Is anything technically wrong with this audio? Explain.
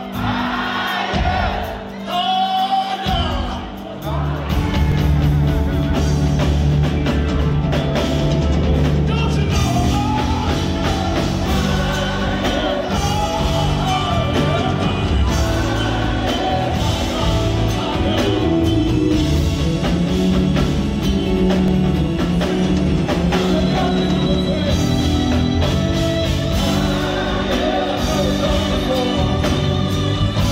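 Yes. There are two brief skips, at 4.92 s and 21.68 s. At each one the sound jumps forward slightly, with no silence. The likely cause is a dropped buffer (overrun). Incoming samples were overwritten before being read, so a few milliseconds vanished and the two edges were spliced together.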